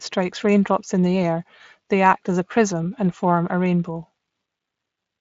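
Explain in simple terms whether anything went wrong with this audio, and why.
Listening through this speech recording, nothing stood out as having gone wrong.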